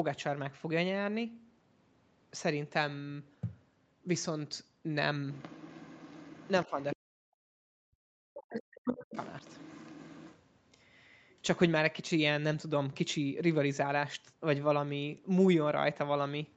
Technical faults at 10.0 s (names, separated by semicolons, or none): other side's voice leaking through